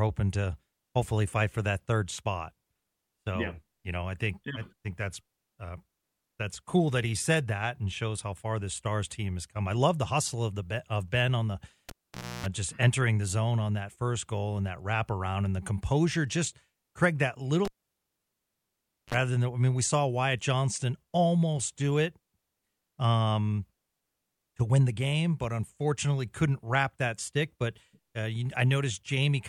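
At 11.89 s, just after "on the", the cable is pulled and plugged in. A pop cuts the speech and near silence follows for about 0.52 s. A 60 Hz mains buzz lasts about 0.30 s while only the plug tip makes contact, then another pop as sound returns at 12.46 s, before "just entering the zone". At 17.65 s it happens again. The gap lasts about 1.44 s, with only a 42 ms burst of 50 Hz buzz before "than I mean we".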